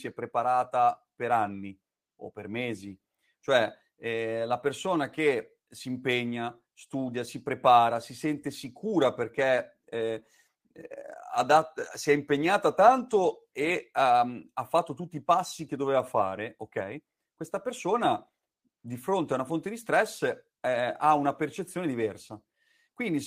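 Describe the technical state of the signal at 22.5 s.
At 22.5 s the repeated timing corrections, running from 0.07 s to 22.89 s, are still active. The receiver keeps trimming short slices of the speech to stay in step, playing it at 104% speed, which is heard, if at all, as small hiccups and a slightly unsteady tempo.

Underlying this is clock drift between sender and receiver, present throughout the clip. The sender's clock runs roughly 4 percent fast, so the jitter buffer keeps filling, and these small, unevenly spaced cuts are what keep it from overflowing.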